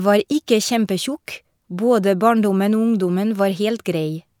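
No technical faults can be heard anywhere in this speech.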